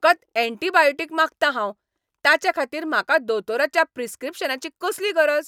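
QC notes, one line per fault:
No faults to note.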